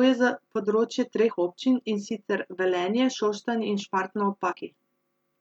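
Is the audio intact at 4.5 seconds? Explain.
No, not quite. From about 4.46 to 4.53 s there's damaged data in the compressed stream: a short run of bad bytes throws the decoder off its frames. It loses sync and hunts for the next header, and you hear a quick chirp, squawk, click or short hole in the speech.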